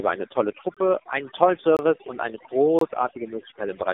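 From the very start the speech has had overdone noise removal. The suppressor is clamping individual frequency bands down to almost nothing wherever they sit close to its noise estimate, and it takes the quieter parts of the voice along with the background noise. What's left is a background of near silence with little twinkling specks in it.

Running through the whole clip as well is the AMR narrowband mobile codec, and it's working hard. The band is a phone line's, roughly 300 Hz to 3.7 kHz, and nothing gets through above 3.8 kHz. The damage is heavy, which fits one of the low modes around 6 kbps. With so few bits for the pulse excitation, the voice turns buzzy and synthetic, and the residue left by the noise reduction swirls as it passes through.

Then there's a gap between chunks, three times, one second apart: at 0.74 to 0.77 s, right after "eine tolle" and before "einen tollen"; at 1.77 to 1.79 s, between "einen tollen" and "und eine"; and at 2.79 to 2.81 s, just after "und eine". 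Each hole is about 23 ms of dead silence, which points to one-second chunks being joined with a bit of padding or a late start. Nothing is missing from the audio. It just stutters at each join.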